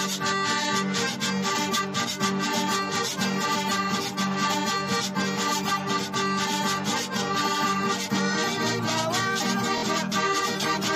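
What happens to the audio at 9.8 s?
At 9.78 to 9.83 s a Bluetooth stutter occurs: the wireless link dropped or delayed about 46 ms of audio, which fits two lost packets, so the receiver replayed its last short buffer. That slice repeats as a brief buzzing stutter, then the sound resumes further on, skipping the gap.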